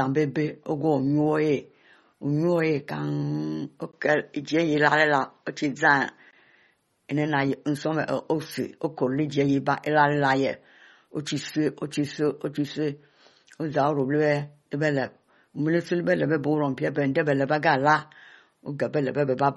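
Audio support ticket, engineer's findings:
MP3 compression, throughout. Watery, swirling speech texture; treble gone above 11.8 kHz. Likely a low-bitrate MP3 encode, consistent with around 32 kbps, where starved frequency lines flicker between frames. Differs from a device switch: steady cut-off from start to end, and the damage is plainly audible as artefacts, not as a change in tone.

Input switched to a poorer device, 3.91 to 6.33 s. 20 ms dropout at entry, then a duller, narrower sound with nothing above 7.4 kHz and a faint new noise floor, roughly 45 dB down. Likely a change to a secondary mic or headset call profile. Level unchanged, so not a gain fault; bounded in time, unlike the codec loss.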